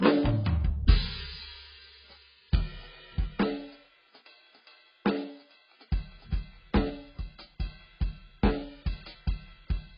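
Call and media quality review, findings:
Music dull and muffled for the whole clip, nothing above 5 kHz. Smeared, warbly texture on held sounds, fizzy highs where there are any. Likely AAC compression, AAC-LC starved of bits and sounding like roughly 12 kbps. Encoder drops the top band and quantises coarsely, so spectral holes and smearing.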